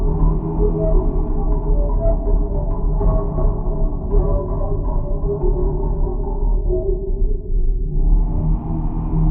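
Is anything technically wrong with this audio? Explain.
Yes. From 2.08 to 4.08 s the adaptive stream switches to a lower bitrate, consistent with roughly 64 dropping to 16 kbit/s. The quality abruptly worsens, with more codec artefacts and no gap.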